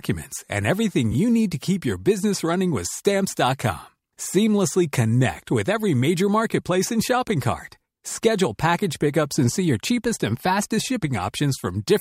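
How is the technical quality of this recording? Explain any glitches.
One glitch affects the recording. At 1.11 to 1.15 s, between "and everything" and "you need to keep", AAC frame loss with concealment occurs: the decoder rebuilt a missing 21.3 ms stretch, consistent with a single lost frame, from the preceding spectrum, leaving a brief smeared, noisy blur.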